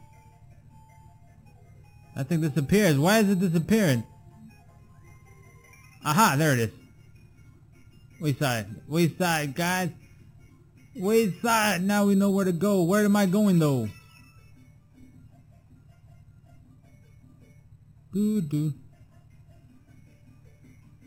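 Imaging from sample-and-hold upsampling runs throughout: a metallic fizz between 4 kHz and 8 kHz, about 16 dB below the sound, fitting an 8 kHz original repeated sample by sample without smoothing. Unlike noise, it tracks the sound's level and mirrors pitch movement downward.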